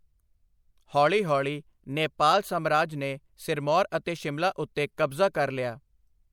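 At 4.97 s, a transform codec smeared its quantisation noise across a block ahead of a sharp attack in the speech, producing pre-echo: a short hiss about 10 ms long before the onset, which arrives softened and blurred rather than crisp.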